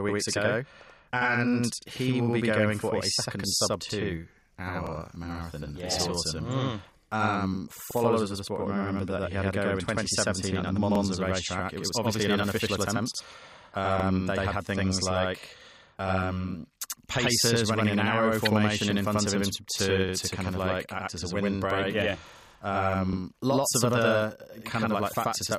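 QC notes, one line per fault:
throughout: channel delay (doubling). One channel runs about 85 ms behind the other, and the two are folded to mono. The late copy arrives at the same level as the first, so every syllable is followed by a distinct slap. At 85 ms the gap is too long to merge into one sound. The speech sounds doubled, like a short echo off a near wall. The offset fits a 4096-sample buffer.
1.82, 4.87, 7.91, 10.95, 14.00 and 17.04 s: overlapping chunks. A 44 ms stretch repeats at each of these joins, which fall about 3.04 s apart. Each new 3 s block starts slightly before the previous one ended, so the tail plays twice. The result is a brief stutter with a click at the seam. Landmarks are just before "marathon yeah this autumn", just before "of the sport may", and just after "had things like um".
18.45 to 18.47 s: corrupt frame decoded. For about 22 ms a short chirpy burst cuts through the speech, peaking at about -10 dBFS. 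Damaged bits in roughly two compressed frames were decoded as if valid. Misread codes and gains pushed energy into the wrong frequencies. That is why the sound is an unrelated squeak. It lasts only as long as the bad frames.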